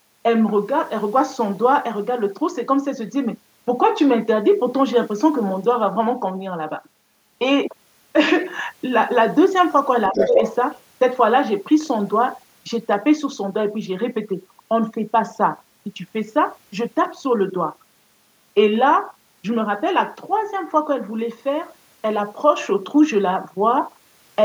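Speech, with an echo canceller that likely lost track during double talk: for about 0.15 s between 10.11 and 10.39 s, speech suppressed in double talk dips the talker's level by around 5 dB. From 10.15 to 10.55 s, incomplete echo removal likely lets the other side's voice leak through the microphone, roughly as loud as the talker for a brief stretch.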